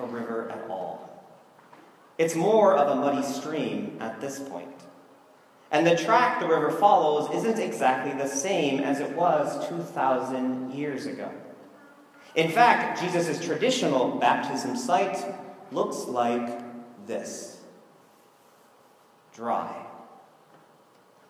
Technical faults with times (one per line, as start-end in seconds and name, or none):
none